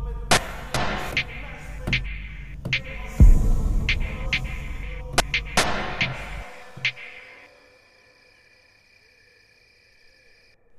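At 0.37 to 1.12 s and again at 4.83 to 5.57 s, chunks play out of order. A 0.37 s block arrives one chunk late, so sound jumbles briefly at the hard joins.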